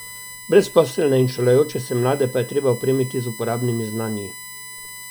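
Throughout the speech runs a USB whine, a steady tone at 1 kHz with its strongest component at 2 kHz, roughly 20 dB below the voice. Bus current in 1 ms frames is leaking into the audio through power or ground. Mains hum would sit far lower, at 50 or 60 Hz.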